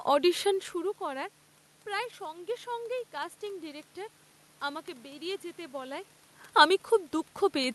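Nothing here points to a technical fault; the room noise in the background belongs to the recording, and the level shifts around half a second in and again near 6 s sound like the talker simply moving relative to the microphone.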